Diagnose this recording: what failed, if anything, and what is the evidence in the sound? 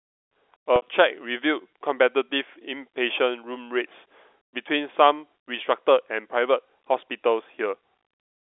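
Network packet loss from 0.76 to 0.82 s dropped 60 ms, fitting three 20 ms packets. Repeating the last pitch period leaves a held, buzzy sound.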